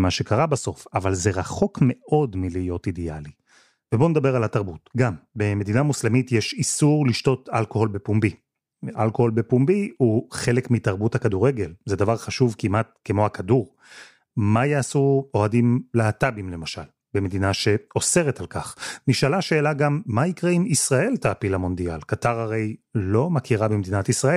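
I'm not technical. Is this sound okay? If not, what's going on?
Yes, nothing in this speech recording points to a technical problem. Listening all the way along, there is no moment where anything goes wrong.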